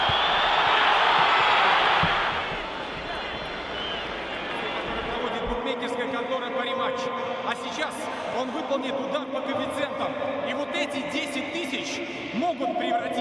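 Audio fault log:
Nothing stood out on listening.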